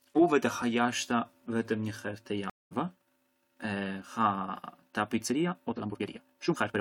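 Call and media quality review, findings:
Stream reconnect, 2.50 to 2.73 s: about 212 ms of dead air, then speech resumes roughly 150 ms further along, so a small slice is just missing. The player lost its connection, reconnected and spun up a fresh decoder mid-stream.

Time-stretched section, 5.23 s to the end: speech abruptly jumps to 1.89x pace and sounds rushed, but the pitch doesn't move. Likely a stretch tool squeezing it to fit a length by dropping short chunks to preserve pitch.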